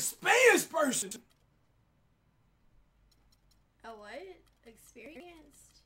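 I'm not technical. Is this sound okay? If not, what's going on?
No. There are two brief jumbled moments, at about 1.02 to 1.16 seconds and again at about 5.06 to 5.20 seconds. Both are chunks out of order. The audio travels in small pieces, each about 46 milliseconds long. Here one piece arrived late and played two pieces after its proper place. Nothing is missing, but the order is scrambled. Each time you hear a quick garble.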